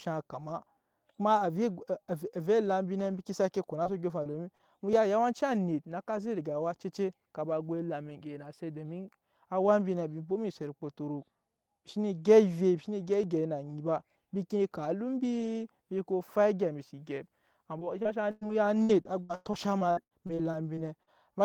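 From 0.78 s to the end, a click recurs every 4.15 s while speech is present. These are likely clock drift buffer slips: the two clocks differ by something like 150 ppm, so the buffer periodically drops or repeats a short block of roughly 30 samples.

Between 3.83 and 4.62 s there are four short concealed packet losses, at 3.83–3.88 s, 4.23–4.28 s, 4.31–4.36 s and 4.55–4.62 s. The first three each cover 20 ms of missing audio and the last covers 40 ms. The decoder extends the preceding sound across each hole and then crossfades back, which is heard as a brief smear or wobble in the speech.

Inside the first three of those events, at 3.85–3.87 s, 4.25–4.27 s and 4.33–4.35 s, a 20 ms lost packet is rebuilt from error correction. The decoder plays the low-bitrate redundant copy carried in the following packet, so there is no gap, but those frames sound rougher and noisier.

From 17.79 to 21.10 s there is repeated packet loss with a robotic sound. 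Seventeen gaps, totalling 700 ms and up to 103 ms each, are patched in quick succession. Concealment fills about a fifth of the span and some of it is rebuilt from redundancy, so the speech sounds choppy with pieces missing.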